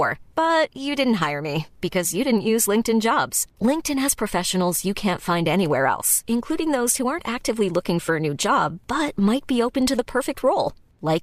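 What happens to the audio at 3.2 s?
Nothing goes wrong at 3.2 s: the speech continues intact through that moment, with no dropout, click or distortion to be heard.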